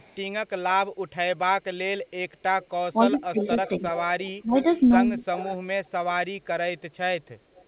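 A short speech recording carries echo leak at 0.0–0.16 s, 2.62–2.67 s, 3.41–5.89 s and 7.55–7.65 s. A delayed copy of the voice trails it by 260 ms in the first two spots and 320 ms in the last two. It is faint, around 30 to 35 dB down, except in the long middle stretch, where it rises to about 15 dB below the speech. The likely cause is a loudspeaker on the far side whose echo canceller let part of the returning sound through. Unlike room reverberation, which smears the sound continuously, this is a distinct, later repeat that comes and goes. Speech suppressed in double talk shows up between 2.93 and 3.83 s, dipping the voice by roughly 15 dB in pieces that add up to about a third of a second, and again at 4.42–4.55 s. These dips overlap with the echo, so the likely culprit is an echo canceller ducking its own talker along with the loudspeaker echo while they overlap. That timing, and the partial rather than total loss of level, set it apart from packet-loss dropouts. 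Throughout, the narrowband sound with nothing above 4 kHz fits a G.711 call path.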